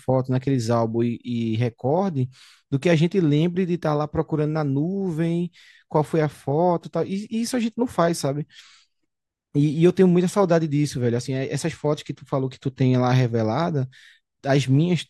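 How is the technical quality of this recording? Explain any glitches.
No glitches can be heard in the recording; the signal stays continuous and steady from the first moment to the last, with no dropouts, interruptions or sudden changes to explain.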